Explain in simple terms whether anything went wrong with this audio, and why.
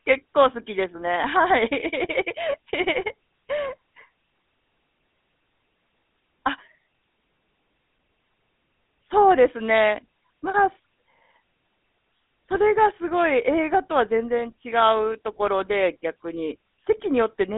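Throughout the clip, the speech has gone through the GSM full-rate codec, an early mobile-phone coder that rebuilds the voice from spaced pulses. That leaves a plainly buzzy, gravelly roughness and nothing above 3.8 kHz. A merely narrow phone line would sound muffled but smooth.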